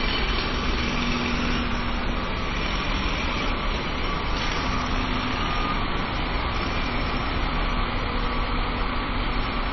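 Throughout, low-bitrate audio saved at a high bitrate: an earlier low-rate MP3 pass, likely, stripped everything above 5.9 kHz, leaving these sounds dull.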